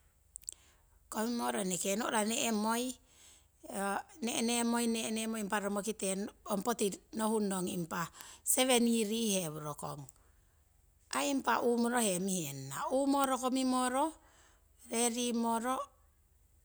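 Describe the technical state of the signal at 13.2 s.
A bit error spike occurs at 13.24 s: a single flipped bit throws one sample off by a power of two before the value snaps straight back. It peaks at about -11 dBFS and sounds as one sharp, broadband tick that bears no relation to the speech around it.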